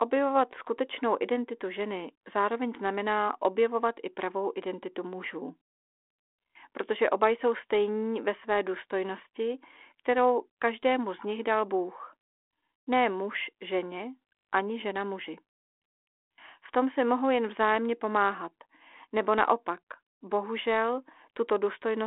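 Nothing technically wrong turns up in this speech recording, which comes through the ordinary narrow band of a phone line with nothing out of place to point at.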